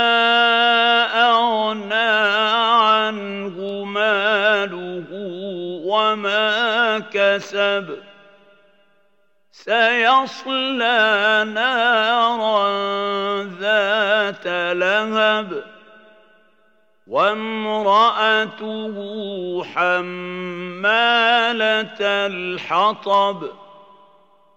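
Sharp single clicks at 3.69, 14.43 and 23.14 s, likely dropped samples: a fraction of a millisecond goes missing, so the waveform steps abruptly, drawing thin vertical spectrogram lines.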